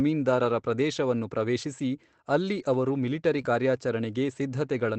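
At 2.55 to 2.61 s, about 40 ms of the speech is a lost packet rebuilt from error correction. The decoder played a low-bitrate copy carried in the following packet, so there is no gap, just a rougher, noisier patch. On a spectrogram it shows as smeared, grainier harmonics. The length fits two packets. Similar 20 ms rebuilt stretches follow at 3.37 to 3.39 s and 3.45 to 3.47 s.

Between those, at 3.41 to 3.45 s, comes a short concealed packet loss. About 20 ms never arrived, and the receiver extended the preceding sound before crossfading back. It is heard as a brief smear or wobble, all within the Opus call's band-limited, coded sound.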